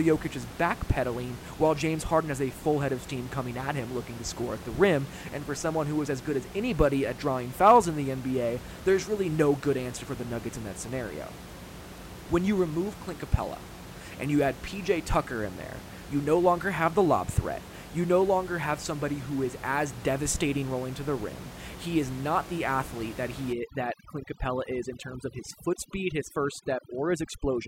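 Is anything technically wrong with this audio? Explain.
Yes. From 23.53 s to the end at 27.67 s, just after "not the athlete that", the speech shows overdone noise removal. A noise reduction stage set too aggressively is pulling individual frequency bands down or out whenever their level sits close to its noise estimate, and the softer parts of the speech fall into that range. The room noise, about 15 dB below the speech before this point, drops and breaks up into twinkling specks.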